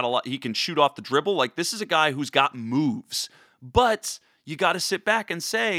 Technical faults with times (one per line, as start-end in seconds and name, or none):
none